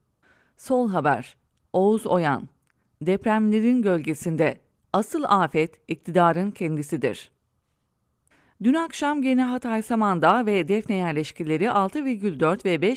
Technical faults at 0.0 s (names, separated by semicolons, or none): none